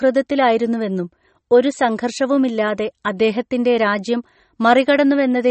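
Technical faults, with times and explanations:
Throughout, MP3 compression: nothing above 8.4 kHz, and a plainly audible watery swirl as weak frequency lines flicker on and off between frames. The likely cause is a bit-starved encoder, consistent with a 32 kbps stream. A plain low-pass filter would dull the treble without this swirl.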